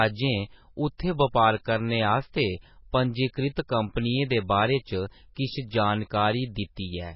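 Heavy MP3 compression at a starved bitrate, likely around 16 kbps, runs through the whole speech clip. Nothing survives above 5.5 kHz, so the treble is dull, while dropped weak detail flickers between frames, making the sound watery and swirly, with chirpy s sounds and smeared attacks.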